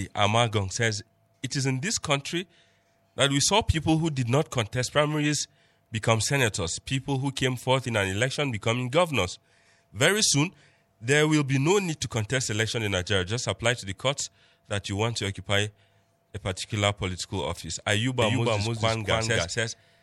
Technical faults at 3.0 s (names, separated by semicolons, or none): none